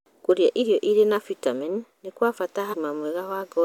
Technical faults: damaged data in a compressed stream

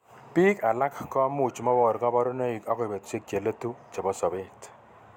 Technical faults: none

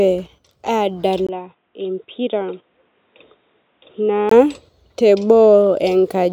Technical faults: input switched to a poorer device

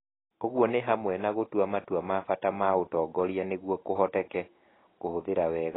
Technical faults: AAC compression

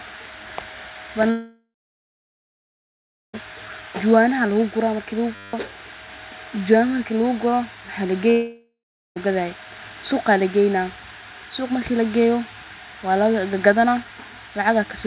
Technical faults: long network dropout; system hang loop

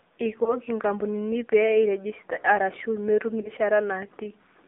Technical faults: AMR narrowband mobile codec; lost AMR speech frames

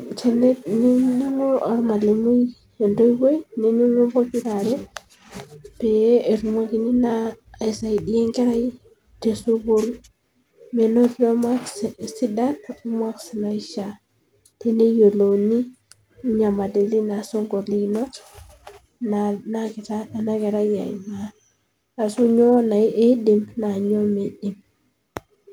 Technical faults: none

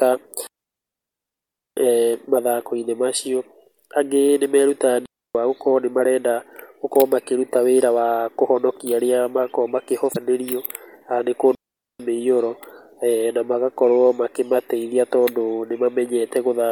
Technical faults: digital wireless dropout; damaged data in a compressed stream

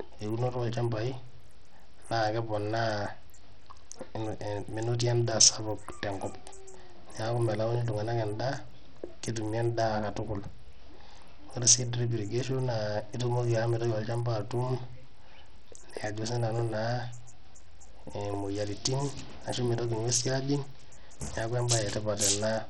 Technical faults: Bluetooth SBC compression

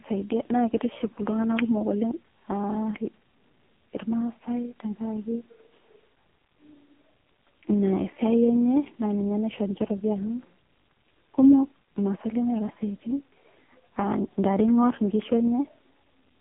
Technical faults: AMR narrowband mobile codec

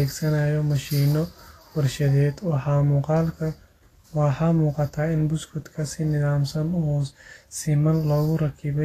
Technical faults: Vorbis compression

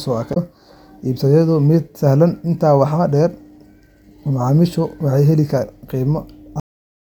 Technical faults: damaged data in a compressed stream; cut-off end

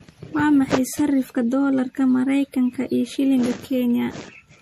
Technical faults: generation loss

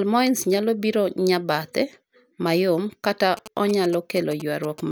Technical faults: GSM signalling bursts

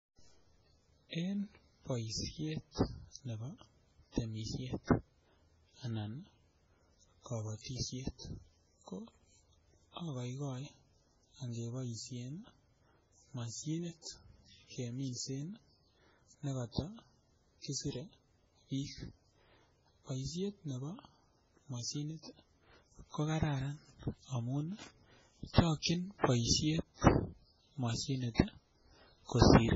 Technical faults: MP3 compression

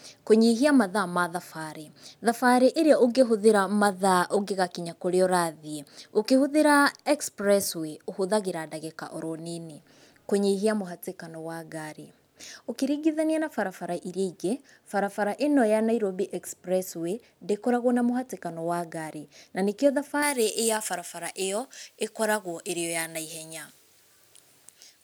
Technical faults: pre-emphasis left on

